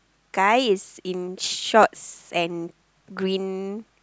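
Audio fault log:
1.83 s repeated buffer: late audio made the device replay its last 4 ms block once, fitting a 64-sample buffer, heard as a brief click.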